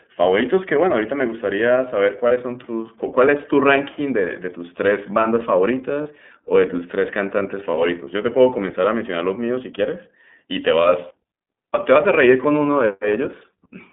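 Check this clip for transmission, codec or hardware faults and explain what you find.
Two faults are audible: the whole speech clip has passed through the iLBC codec, and three short iLBC frame losses occur.

iLBC codec, throughout: each frame's excitation is coded independently within a 200 Hz to 3.5 kHz band, giving plainly rough, synthetic speech consistent with 30 ms frames at 13.33 kbps.

Lost iLBC frames, at 2.28, 6.03 and 7.70 s: the decoder bridges each 30 ms gap by repeating the last pitch cycle with noise, heard as a brief buzzy held vowel that recovers immediately.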